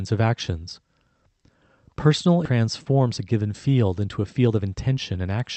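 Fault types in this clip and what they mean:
Skip ahead: At 2.45 s the speech jumps forward with no silence at the join, and roughly seven tenths of a second is simply gone. Unlike a dropout or gap, nothing is muted or filled in; the two sides butt directly together, so the flow breaks but the timing never pauses.
Jitter buffer speed-up: From 2.99 to 3.42 s and again from 4.19 to 5.37 s, the speech runs fast, at 110% and then 112%, as short pitch-period slices are cut out repeatedly, about 50 ms and 150 ms in total. Pitch stays the same, so it sounds hurried rather than chipmunk-like.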